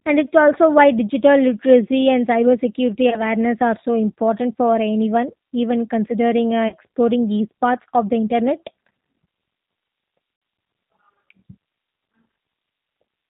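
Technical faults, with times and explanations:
Throughout: G.729 codec. The speech has the plainly audible roughness of a G.729A link at 8 kbit/s. Each 10 ms frame is rebuilt from a vocal tract filter, a pitch predictor and a handful of pulses rather than the original waveform, so the voice comes out slightly synthetic and grainy. Nothing above 4 kHz survives, which leaves it dull and narrowband. Fricatives lose their edge.
3.10 to 3.21 s, 6.68 to 6.76 s and 10.36 to 10.42 s: VoIP packet loss concealed by the speech codec. About 20 ms, 40 ms and 60 ms of audio went missing, which fits one, two and three lost packets. The decoder filled each gap by carrying its last pitch and filter forward at a falling gain, so the voice smears into a buzzy or noisy fading tone. Each frame builds on the one before it, so the sound stays weak or distorted briefly after the packets resume.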